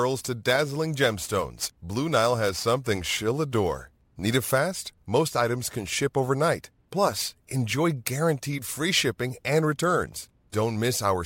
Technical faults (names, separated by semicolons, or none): crude rate conversion